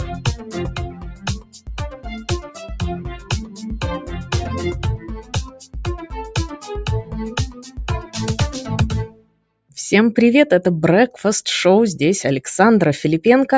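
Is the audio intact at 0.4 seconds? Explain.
No. A noise suppressor applied to music or sounds runs through the whole clip. It mistakes steady parts for noise, so levels pump by around 15 dB. From 0.14 to 0.55 s, the noise suppressor cuts this sound more heavily, pulling it down by up to about 8 dB and thinning its sustain.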